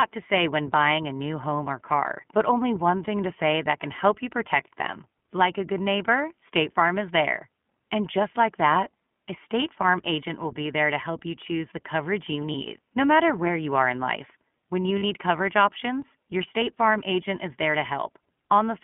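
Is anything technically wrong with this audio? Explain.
Yes. Throughout, the speech sounds thin, slightly rough and synthetic, confined to roughly 150 Hz to 3.4 kHz. This is the iLBC codec, coding each 20 ms frame independently at a rate consistent with its 15.2 kbps mode.

There are lost iLBC frames at 12.52 to 12.55 s, between "choose the coverage you" and "no matter where you", and at 14.98 to 15.04 s, just before "coverage options your". Each gap is a brief held, buzzy vowel, about 20 ms and 40 ms long, which fits one and two dropped frames. The decoder repeats the last pitch cycle mixed with noise, and the speech recovers immediately afterwards.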